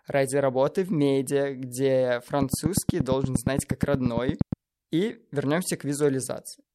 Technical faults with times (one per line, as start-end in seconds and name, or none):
2.42-4.54 train of clicks